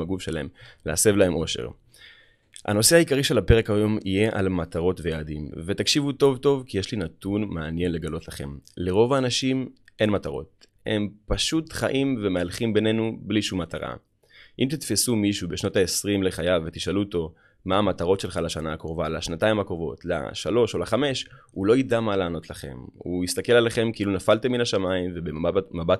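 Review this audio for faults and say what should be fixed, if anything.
Nothing here needs fixing, since no technical faults turn up anywhere in the recording.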